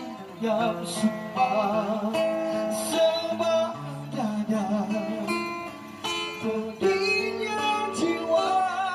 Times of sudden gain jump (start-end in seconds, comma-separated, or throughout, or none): none